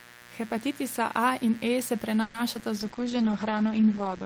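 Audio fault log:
Throughout, mains buzz: a steady, raspy buzz sits under the speech at about 25 dB below it, built on 60 Hz. Sharp switching spikes arrive twice per mains cycle, so the interference carries a dense stack of 60 Hz harmonics reaching up into the kilohertz range. That stack is what makes it raspy rather than a smooth low hum. It also never changes or pauses, unlike the network faults below, which come and go at specific moments.
2.21–2.36 s, call audio freeze: the sound stalls for about 130 ms. The receiver stretches the last moment into a fading buzz or hiss, but it never drops into full silence. The speech then resumes exactly where it stopped, with nothing skipped, so the fault adds a gap rather than removing any audio. The likely cause is packets held up in transit until the jitter buffer ran dry. That lossless pause is what separates it from concealed packet loss.
2.54–2.57 s and 2.59–2.62 s, short concealed packet loss: two quick smears follow each other closely. 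About 40 ms of audio is lost in the first and about 20 ms in the second, and only about 10 ms of synthesized continuation covers each hole. Unlike the freeze just before, real speech is actually gone here. The first event also pulls the timing back by a few hundredths of a second, which takes back some of the delay the freeze added.
2.77 s to the end, call bitrate drop: the speech turns rough, watery and muffled once the encoder falls from 32 kbps to 10 kbps. It stays at the lowest rate for about 1.26 s. Audio bandwidth shrinks from 20 kHz to 8 kHz, so the top of the sibilance and brightness is cut away. The damage is a sustained change in tone and texture rather than a momentary break, which distinguishes it from both the freeze and the packet-loss smears.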